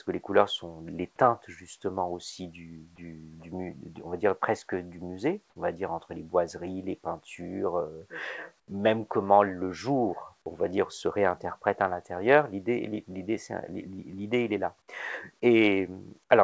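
At 8.60 s the background changes for about 80 ms, until 8.68 s. The quiet bed, already about 44 dB below the loudest passages, drops by about 14 dB and turns into a smooth, featureless hiss before the real background returns. This is comfort noise in place of the background. The likely cause is that discontinuous transmission on the call path stopped sending audio during the lull, so the receiver filled the gap with synthetic noise. That path, through a G.722 codec with nothing above 8 kHz, is audible in the dull top end.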